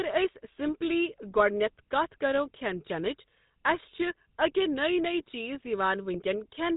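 GSM full-rate codec damage runs through the whole clip. The speech is rebuilt from a vocal-tract filter driven by sparse, evenly spaced pulses, which fits a 13 kbps coder. This leaves a plainly audible buzzy, gravelly roughness, with nothing above 3.8 kHz.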